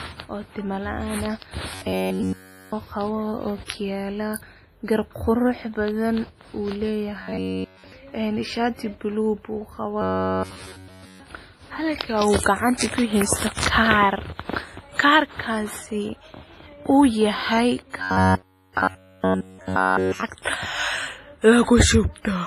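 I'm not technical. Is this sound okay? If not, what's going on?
No. Robotic sound from repeated short buffers at 1.74–2.73 s, 7.23–7.92 s, 10.02–11.20 s and 17.98–20.23 s: the speech becomes a metallic buzz, likely because tiny slices of about 11 ms were replayed over and over, which forces a steady 94 Hz drone.

Low-bitrate audio saved at a high bitrate, throughout: the sound has nothing above 15.4 kHz, likely because it was first squeezed into a small file and later resaved larger, which cannot restore what was lost.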